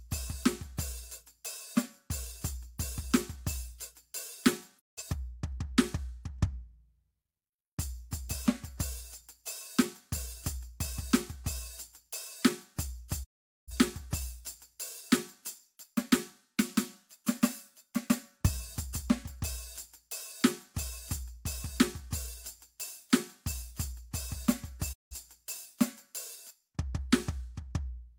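Music, with a digital broadcast dropout at 4.78–5.03 s, 13.23–13.72 s and 24.92–25.16 s. Each time the receiver mutes with a 20 ms fade, losing about 171, 427 and 171 ms of programme, which fits several corrupted frames per gap.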